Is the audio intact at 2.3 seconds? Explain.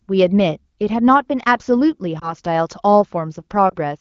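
No. From 2.19 to 2.33 s there is a lost AMR speech frame: one 20 ms frame failed its checksum and was dropped. The wideband decoder filled the gap by repeating the last good pitch and vocal tract settings at reduced gain, so the speech briefly dips or warbles. Because only one frame is missing, the concealment never fades to silence, but the speech sounds weak or rough for a moment while the decoder settles back in.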